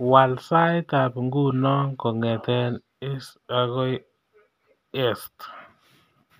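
Nothing in this speech recording stands out as a technical fault; there's no dropout, glitch or distortion to point to at any moment.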